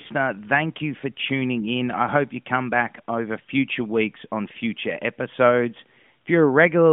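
The speech has no technical faults: it comes through as an ordinary narrowband mobile call on the AMR-NB codec at 12.2 kbps, with the line band spanning roughly 150 Hz to 3.5 kHz.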